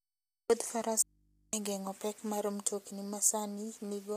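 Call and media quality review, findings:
Grainy, rough speech for the whole clip, noise between harmonics. Likely low-delay AAC compression (AAC-ELD); short frames, fits a low bitrate around 32 kbps.

Audio dropout to a faint residue, 1.02–1.53 s: signal cuts abruptly, only mains hum roughly 35 dB down for half a second. Likely upstream loss while the path stayed live.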